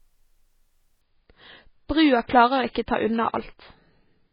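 At 1.01 s the speech switches without any gap to an adaptive stream at a lower bitrate, the kind of sound that points to a drop from around 128 to about 16 kbit/s MP3. From there to the end nothing survives above 5 kHz, so the treble dulls and turns watery with codec artefacts. A spectrogram shows the upper band cut off sharply at that instant, while the waveform runs on unbroken.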